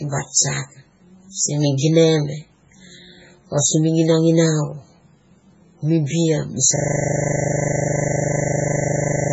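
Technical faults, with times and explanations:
Throughout: MP3 compression, likely the cause of heavy codec damage. The sound is watery and swirly, with nothing above 7.7 kHz. Weak frequency lines drop in and out between frames as the encoder runs short of bits, which points to a very low bitrate of around 16 kbps.
6.76 s to end: system hang loop. A 40 ms piece of audio repeats exactly, 64 times, until the clip stops. This gives a steady 25 Hz repetition because the sound hardware kept cycling one ring buffer while the system was frozen.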